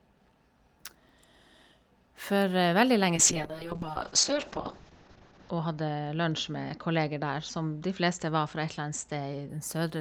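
Speech here, and from about 3.16 s to 9.55 s there's a call bitrate drop: the encoder gets starved, going from around 40 kbps down to 6 kbps, bottoming out for roughly 2.3 s. Audio band shrinks from 20 kHz to 8 kHz, so it goes muffled and rough until the rate climbs back.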